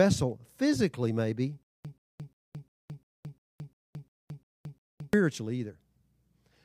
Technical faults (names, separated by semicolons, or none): stutter with silent gaps